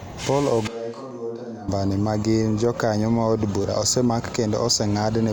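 From 0.68 to 1.68 s the speech suddenly turns hollow and roomy, drops about 10 dB, and thins out in the low end, with background noise sitting only about 35 dB below it. That's likely a switch to a distant microphone, with the close mic's signal lost and then restored.

At 3.62 to 3.64 s there's a quick buzzy stutter, a repeated buffer. When fresh audio ran late, the device replayed the same tiny slice two extra times with hard joins, which fits a 10 ms buffer, and roughly 20 ms of real audio goes missing.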